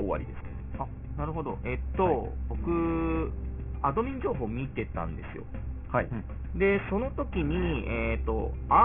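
Aliasing runs through the whole clip, from start to finish. The audio was resampled to a much lower rate with no filter first removing content above the new limit, so everything above 3 kHz folds back down below that edge at unrelated, wrong frequencies, which fits a drop to a 6 kHz sample rate. The folded energy sits roughly 20 dB under the wanted sound, adding a gritty, metallic haze, and the spectrum stays dense right up to 3 kHz before stopping abruptly.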